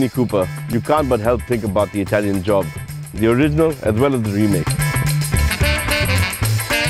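At 0.73 s and again at 6.19 s the audio drops into a block of digital silence, about 1.3 ms and then 4 ms of zeros, likely where the output buffer wasn't filled in time. The first fits a 64-sample block. With no fade, each comes across as a quick tick rather than a gap.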